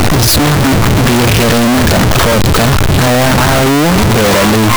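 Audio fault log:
Throughout: signed and unsigned mixed up. Speech is harsh and very loud, quiet moments matching the rest. Likely 8-bit samples read with the wrong sign convention.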